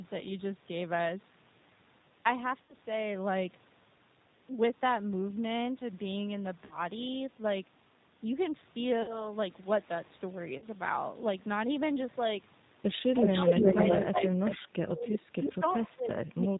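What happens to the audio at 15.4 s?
Speech suppressed in double talk runs from 14.85 s to the end of the clip, so 15.4 s falls inside it. The speech dips and breaks into pieces, falling at its deepest by about 30 dB, with roughly a second affected in total across the span. The likely cause is an echo canceller facing both sides talking at once: unable to tell the near talker from the loudspeaker's return, it turned everything down, taking the wanted speech with the echo.

An echo leak overlaps this moment, from 15.12 s to 15.5 s. A delayed copy of the speech arrives 366 ms late, at about 5 dB below the direct sound, so it sits close to the talker's own level and is easy to hear as a second, trailing version. This is likely a loudspeaker's output reaching a microphone, with the echo canceller failing to strip all of it before sending it back.

The G.729 codec shapes this moment as it does the whole clip. 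At 8 kbit/s it rebuilds speech from a vocal tract model, a pitch predictor and a handful of pulses per 10 ms frame rather than sending the waveform. Nothing above 4 kHz survives, and the damage is plainly audible: the speech sounds rough and synthetic, and the echo and the suppression gaps pass through the same coarse, muffled rendering.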